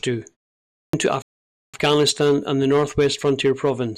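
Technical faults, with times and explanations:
0.76–0.93 s, clipped start after a pause: after about half a second of silence, the speech begins abruptly, with roughly 174 ms of its opening missing. The output device had gone idle during the pause. It needed time to wake before sound came through again.
1.22–1.74 s, playback stall: the speech stops mid-flow and goes silent for about 0.51 s. It then resumes where it left off. This is likely the player running out of data or being blocked, leaving the output starved until it recovered.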